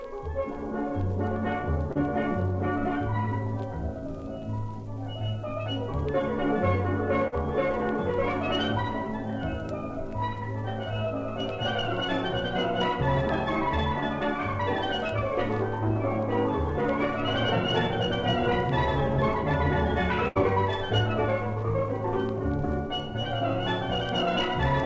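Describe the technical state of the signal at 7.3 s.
A brief smear and wobble runs from 7.28 to 7.35 s, where the sound briefly loses its shape before blending back. This is short concealed packet loss: about 40 ms of audio arrived too late or not at all on the call path, and the receiver filled the gap by extending the preceding sound for roughly 44 ms before crossfading into the real signal again.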